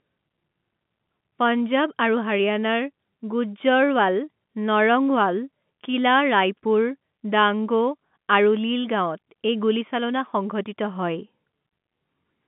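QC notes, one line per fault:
No faults are present: the speech sits in the narrow band of G.711 telephone coding, with the line passing about 150 Hz to 3.5 kHz and nothing above 3.8 kHz.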